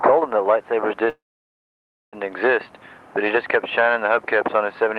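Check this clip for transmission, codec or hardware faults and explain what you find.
There's one clear fault, a call audio freeze from about 1.09 s to 2.15 s. The sound stops and is stretched into a short fading tail, then it's nearly silent for close to a second before picking up exactly where it left off. Nothing gets skipped, so the rest of the clip just lands about 1 s later. The likely cause is packets stalling in transit until the jitter buffer ran dry and the receiver padded the gap. The call codec's top end stops around 12 kHz throughout.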